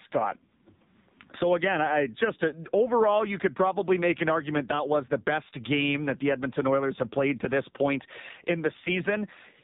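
AMR narrowband mobile codec damage runs through the whole clip: the speech is band-limited to 4 kHz, with nothing above, and sounds buzzy and synthetic, consistent with a low-rate mode around 5.9 kbps, where a crude vocal-tract model driven by sparse pulses rebuilds each 20 ms frame.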